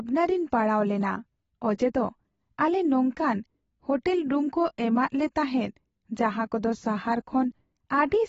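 Throughout, nothing sounds above 7.7 kHz and sibilants warble and smear, likely from low-bitrate AAC compression; plain filtering would dull without the fizz.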